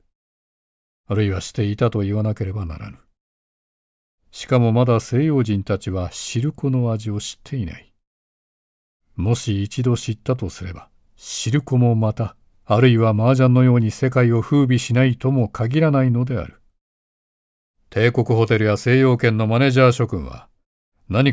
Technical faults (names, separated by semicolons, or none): none